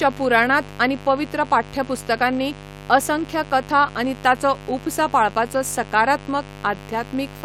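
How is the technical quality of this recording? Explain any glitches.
The recording is marred by mains buzz running under the speech for its whole length. Spikes from switching circuitry such as a dimmer or rectifier, or from a poorly shielded line, enter the audio twice per 50 Hz cycle, so the interference repeats at 100 Hz and carries harmonics far up into the kilohertz range. It sits roughly 20 dB below the speech and sounds raspy and edged. Plain hum, by contrast, is a smooth, low tone.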